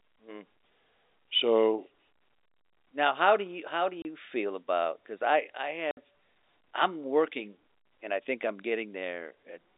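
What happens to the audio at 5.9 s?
At 5.91 to 5.97 s the speech drops out for 60 ms: packet loss filled with silence, consistent with two 30 ms packets lost and replaced by silence. The waveform flatlines with abrupt edges, and the spectrogram shows a blank vertical gap.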